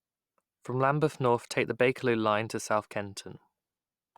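No technical faults can be heard anywhere in this recording of speech.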